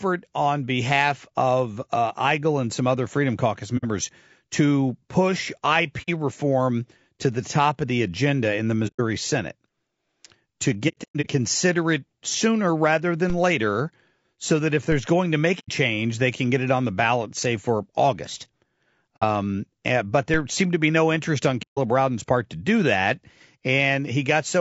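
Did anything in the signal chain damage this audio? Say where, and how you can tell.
Yes. The codec stage is the likely source of damage throughout. Speech sounds rough and grainy, with noise filling the gaps between harmonics and a synthetic-sounding top band. That points to low-delay AAC compression (AAC-ELD) at a low bitrate, which fits about 32 kbps. At that bitrate too few bits are left to code the detail between harmonics.

The network or transport stage dropped packets, causing AAC frame loss with muting. Soft-edged holes appear at 3.77–3.85, 6.02–6.10, 8.87–9.01, 10.88–11.27 (scattered dropouts, the longest around a tenth of a second), 15.59–15.70, 19.17–19.24 and 21.62–21.79 s. The decoder zeroed the missing spectrum, and overlapping windows faded it.

The converter or input stage produced a DC step at 13.30, 14.92 and 20.34 s. At each point the waveform's zero line jumps, which is heard as a low thump while the speech continues unchanged. 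A 5 Hz high-pass then bleeds the offset away.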